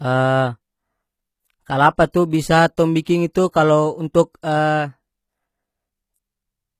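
It's a speech clip, and the whole thing has that telltale replicated-treble sound. Sibilants come out gritty and a bit metallic, and nothing reaches above about 14.9 kHz. That's most likely HE-AAC compression, where only the lower spectrum is really coded and the highs are patched in by copying lower bands upward under a coarse envelope. The damage is plainly audible, which fits a low bitrate somewhere around 20 kbps, and the copied harmonics don't quite match the real ones above the crossover. On top of that there's pre-echo in two spots. From 3.02 to 3.06 s a hiss runs about 44 ms ahead of an attack, softening its onset. At 4.42 s there's a much shorter smear of about 13 ms before another transient. In both cases a sharp onset landed late in a transform block, so the quantisation noise sized for the loud part spread back into the quiet stretch just before it.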